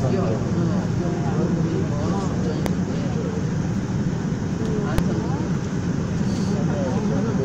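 At 2.66 s and again at 4.98 s a single hard bang cuts through: invalid numbers at full scale. A calculation failed and its output was pinned at one extreme value for about 0.73 ms, then 2.9 ms. Unlike clipping, the bang ignores the surrounding sound's level.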